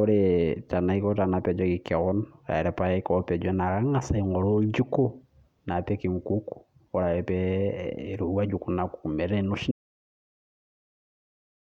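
At 9.71 s the speech cuts off abruptly, and the final two seconds are silence with no room tone beneath. This is an audio dropout to silence, likely caused by the input being lost while the recorder kept writing zeros.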